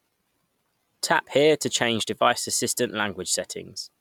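A speech recording with nothing technically wrong with it.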